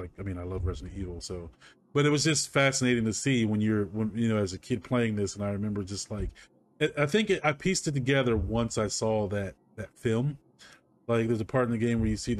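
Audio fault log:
No faults detected in the audio.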